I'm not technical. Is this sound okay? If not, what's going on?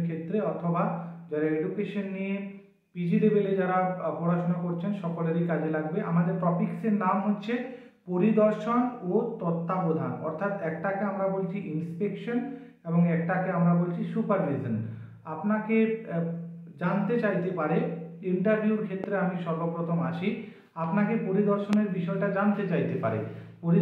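No. There are two loud pops, at 19.04 to 19.06 s and 21.73 to 21.75 s. Each is a single sharp thump, likely an electrical jolt, with the sound continuing underneath rather than cutting out.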